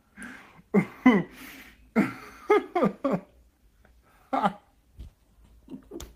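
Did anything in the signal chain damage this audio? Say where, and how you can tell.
No, nothing in the signal chain shows audible damage: there are no dropouts, discontinuities, level jumps or added noise anywhere in the audio.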